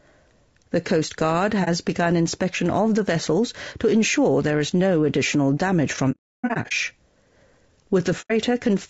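Throughout, the speech sounds rough and grainy, with noise filling the gaps between harmonics and a thin, synthetic top band. This is likely low-delay AAC compression (AAC-ELD) at a bitrate near 32 kbps. On a spectrogram, harmonic lines look smeared and the high band looks blotchy.

AAC frame loss with muting opens a brief dip at 1.64 to 1.68 s, soft-edged holes at 8.21 to 8.32 s, and scattered bursts from 6.11 to 6.73 s, the longest run lasting roughly a third of a second. The decoder zeroes each lost frame's spectrum, and the overlapping windows fade the sound out and back in. A waveform shows tapered gaps, and a spectrogram shows blank vertical columns.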